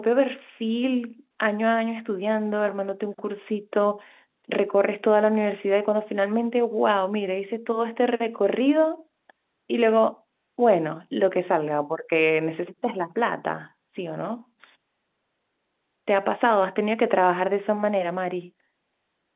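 No faults on this speech clip; it carries the band-limited, 8 kHz A-law character of ordinary G.711 telephone coding, with nothing heard above 4 kHz.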